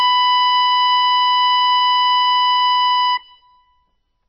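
Throughout the music the top end stops dead at about 5.9 kHz, leaving everything dull and boxed-in. What remains has a watery, swirling texture, with chirpy metallic glints and softened attacks. This is heavy damage of the kind MP3 compression leaves, likely from a starved bitrate, which fits a stream of only about 22 kbps. Short of bits, the encoder discarded all treble above a fixed cut-off and kept dropping weaker frequency components, letting them flicker in and out from frame to frame.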